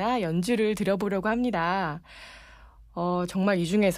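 A speech clip with sample clock jitter from about 0.48 s to 1.98 s. The converter's clock wobbles by around half a microsecond, so samples land slightly off time, adding a faint hiss, roughly 50 dB down, that swells on loud, bright syllables and drops away in pauses.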